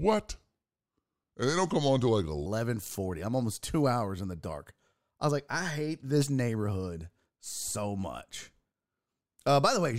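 A section at the wrong speed runs from 0.0 to 2.46 s: the speech plays at 0.812 times normal speed, about four semitones lower and drawn out, likely from a wrong clock.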